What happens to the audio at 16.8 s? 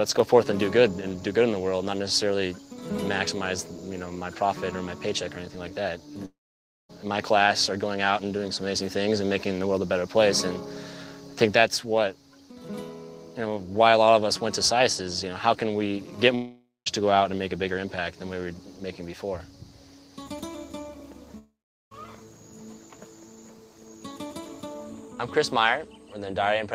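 A long network dropout, 16.35–16.88 s: audio likely stopped arriving, so the last sound fades as a buzz into silence, losing about half a second.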